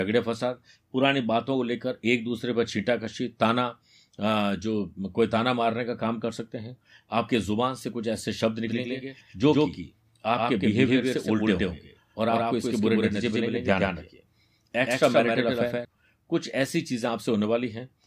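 Speech, with a doubled audio track from 8.67 s to 15.85 s. A second copy of the speech runs about 150 ms behind the first, at roughly the same level. It appears and disappears abruptly at those times. The copy carries no reverb tail or room colour and covers the full frequency range. The likely cause is the signal being captured again through a slower path, or an edit that leaves two copies out of step.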